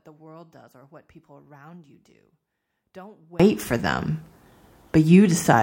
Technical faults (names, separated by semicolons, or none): one channel inverted